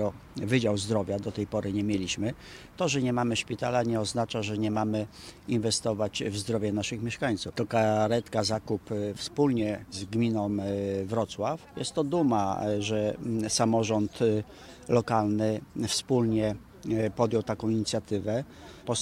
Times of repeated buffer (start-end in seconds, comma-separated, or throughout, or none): none